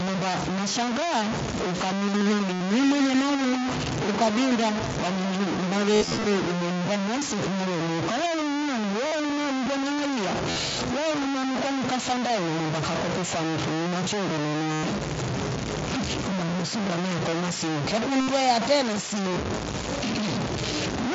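Throughout, the speech is coarse and gritty. The grain rises and falls with the speech, and noise sits about as loud as the speech itself. Quiet passages sputter or vanish. This is low bit depth without dither, likely truncation to roughly 3 bits.

At 2.53 to 2.61 s, about 75 ms is lost. It is filled with a buzzy, held tone. This is concealed Bluetooth headset packet loss. The receiver repeats the last stretch of waveform, and a small warble marks the return of real audio.

From 2.84 to 6.69 s, a feedback echo between two devices appears. Each phrase returns about every 0.2 s, thinner and ringing, peaking about 12 dB below the speech. A second device replays it into the first microphone.

From 5.94 to 6.24 s, losses scatter across 0.3 s. The longest run is about 53 ms, heard as broken buzzing.

Further concealed losses follow at 9.07 to 9.12 s, 10.50 to 10.56 s, 14.74 to 14.84 s, 18.21 to 18.28 s, and 19.29 to 19.36 s. 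The one near 14.7 s is longest, at about 98 ms. Each is a brief buzzy hold. The light mSBC codec graininess underneath them is normal.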